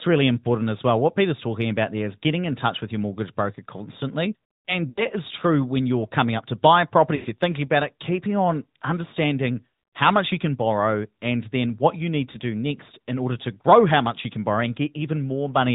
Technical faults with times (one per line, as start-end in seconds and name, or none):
0.00-15.75 AMR narrowband mobile codec
4.90-5.04 lost AMR speech frames
7.16-7.26 lost AMR speech frames
12.32-12.37 lost AMR speech frames